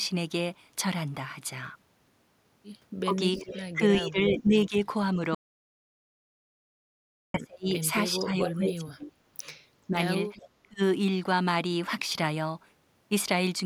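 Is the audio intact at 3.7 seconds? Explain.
No. At 3.7 s the speech is caught inside a stretch of speech suppressed in double talk running from 3.05 to 10.82 s, likely because the echo canceller could not separate this talker from loudspeaker echo while both sides spoke. In pieces totalling roughly 4 seconds, the voice dips, thins or drops out, by as much as roughly 30 dB. The waveform shows sudden envelope collapses.

An echo leak is also present, from 3.37 to 4.68 s, likely a loudspeaker echo that the loudspeaker side's canceller left partly in place. A delayed copy of the voice trails 422 ms behind, roughly 10 dB quieter. On a spectrogram it appears as faint, delayed duplicates of the speech harmonics.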